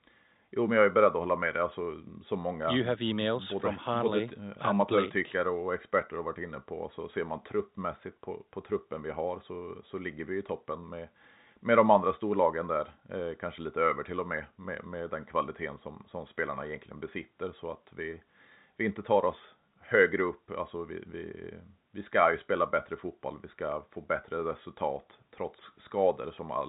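Nothing in the speech here points to a technical fault. The G.711 telephone coding it passes through is audible as a band that stops at about 3.8 kHz, with at most a faint grain that rises and falls with the level.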